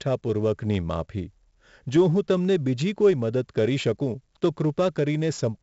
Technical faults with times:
0.00-5.63 4-bit ADPCM compression

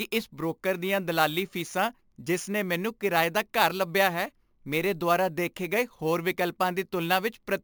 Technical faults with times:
0.00-7.63 imaging from sample-and-hold upsampling

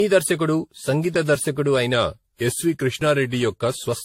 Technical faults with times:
0.00-4.05 generation loss
1.93-3.89 drift correction step

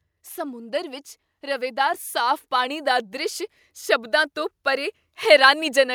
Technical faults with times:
0.34-3.44 automatic gain rising

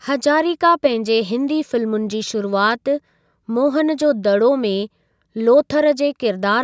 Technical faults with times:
none

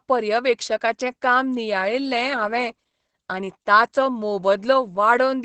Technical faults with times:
0.00-5.44 Opus voice compression

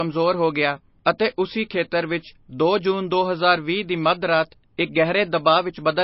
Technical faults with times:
0.00-6.03 low-bitrate audio saved at a high bitrate

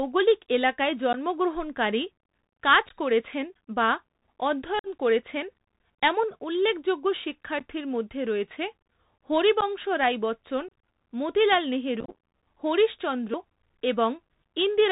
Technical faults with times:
0.00-14.91 Bluetooth CVSD headset codec
1.13-1.15 unconcealed Bluetooth headset packet loss
2.89-2.94 unconcealed Bluetooth headset packet loss
4.79-4.87 unconcealed Bluetooth headset packet loss
7.59 unconcealed Bluetooth headset packet loss
9.61-9.63 unconcealed Bluetooth headset packet loss
10.68-10.71 unconcealed Bluetooth headset packet loss
12.00-12.15 unconcealed Bluetooth headset packet loss

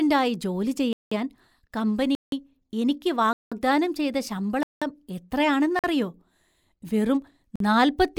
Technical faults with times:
0.93-1.11 block of digital silence
2.15-2.32 block of digital silence
3.33-3.52 block of digital silence
4.63-4.82 block of digital silence
5.79-5.84 block of digital silence
7.56-7.60 block of digital silence

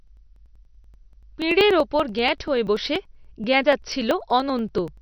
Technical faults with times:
0.00-5.02 MP3 compression
0.07-4.97 periodic USB or driver dropouts

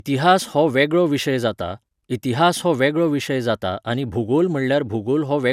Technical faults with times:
0.00-5.53 generation loss

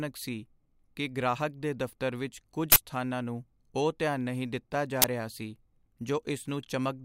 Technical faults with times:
2.72-2.76 uninitialised buffer
5.02-5.04 uninitialised buffer

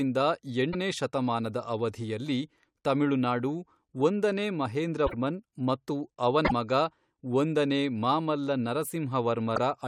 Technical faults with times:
0.72-0.75 broken MP3 bit reservoir
5.06-5.14 broken MP3 bit reservoir
6.44-6.52 broken MP3 bit reservoir
9.55-9.58 broken MP3 bit reservoir

